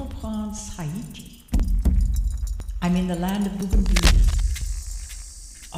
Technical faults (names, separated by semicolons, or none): overlapping chunks; cable scratch noise